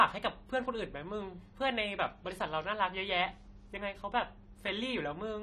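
From start to finish, the speech shows plainly audible AAC compression damage. Nothing sounds above 14.1 kHz. The top end is dull and smeared. Sibilants turn fizzy and warbling. The likely cause is an AAC-LC encode starved of bits, which fits a 32 kbps stream.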